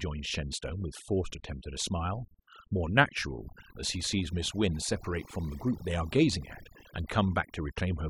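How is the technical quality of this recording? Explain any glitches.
The recording is marred by overdone noise removal, present from start to finish. A noise reduction process was pushed too hard. Wherever a frequency band sits close to the tool's noise estimate, it is pulled far down or switched off entirely. Quieter parts of the speech fall below that line and vanish with the noise. Between phrases the background drops to near silence, dotted with small twinkling specks.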